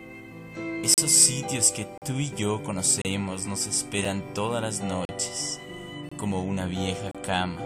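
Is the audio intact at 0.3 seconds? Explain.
Yes, the audio is intact at 0.3 seconds, with no dropout, click, distortion or other fault to be heard there.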